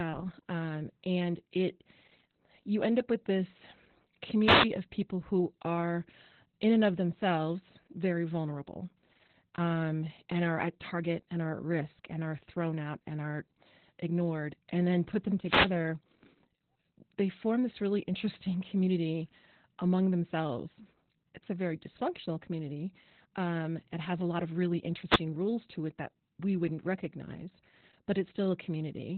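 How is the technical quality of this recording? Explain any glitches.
The technical quality is poor: the whole recording is heavily degraded by low-rate codec compression, and three short bursts of radio noise break through on top of it.

Opus voice compression runs throughout. At only 8 kbps the coder works in its SILK speech mode and restricts the signal to narrowband, so nothing above 4 kHz survives. The excitation is coded coarsely, in 20 ms frames, which leaves the speech muffled, hoarse and faintly robotic. On a spectrogram, energy stops abruptly at a flat ceiling near 4 kHz, and the harmonics below it look smeared and blocky.

Wireless microphone noise hits occur at 4.41–4.70 s, 15.41–15.76 s and 25.06–25.22 s. Each is a swish or burst of static lasting a few tenths of a second. The radio link of an FM microphone faded as reflected signals cancelled, and receiver noise surged up. 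A waveform shows a sudden ragged thickening at each time. On a spectrogram these appear as vertical bands of broadband noise, capped at the same 4 kHz limit because they passed through the codec as well.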